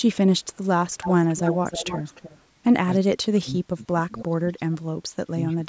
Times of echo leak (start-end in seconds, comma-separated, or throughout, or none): 1.01-2.41